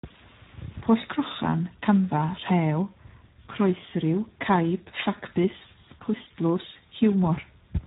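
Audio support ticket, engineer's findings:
Speex codec, throughout. Speech hoarse, noisy, bordering on robotic; heavy damage. Nothing above 3.8 kHz, which points to narrowband mode at a low setting, fitting about 8 kbps. Starved CELP excitation; the grainy roughness distinguishes it from plain low-pass filtering.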